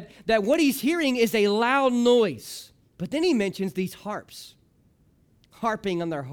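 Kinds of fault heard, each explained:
Bit error spike: a flipped bit throws two samples off by a power of two, giving one sharp tick at 0.54 s, just before "he's hearing is a". It peaks around -18 dBFS, showing as a lone needle in the waveform and a thin full-band vertical line on a spectrogram.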